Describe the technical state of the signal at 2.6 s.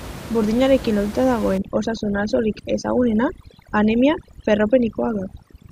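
At 2.6 s the background has dropped and broken up into twinkling specks. This is overdone noise removal, running from 1.58 s to the end. Set too strong, it cuts individual frequency bands whenever they approach its noise estimate, and quiet voice detail goes with them.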